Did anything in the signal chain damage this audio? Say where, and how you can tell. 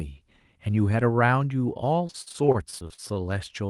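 Yes. The damage is at the network stage: repeated packet loss (robotic sound) runs from 2.07 s to the end of the clip. Over a dozen short gaps appear, the longest about 48 ms, and roughly a fifth of that stretch is concealment rather than real speech. The receiver bridges each missing stretch by extending the last sound it had, so the speech turns choppy and takes on a buzzy, robotic quality, with brief pieces simply gone.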